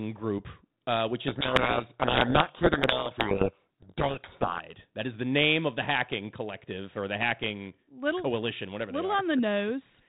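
From 1.28 to 4.61 s, just after "group uh which", the receiver unpacks the G.726 code words in the wrong bit order, a codec payload misread. Every decoded difference value is scrambled, burying the speech in harsh distortion until the normal 32 kbit/s G.726 sound resumes.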